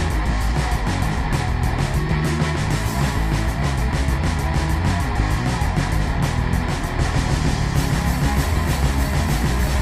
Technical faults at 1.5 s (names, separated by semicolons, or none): none